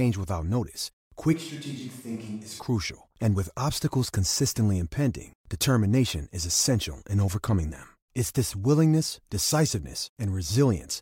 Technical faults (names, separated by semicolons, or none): switch to a distant microphone